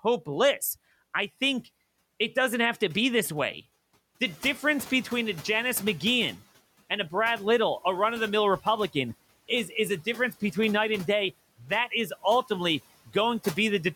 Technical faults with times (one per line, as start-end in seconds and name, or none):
4.25-6.36 noise suppressor catching up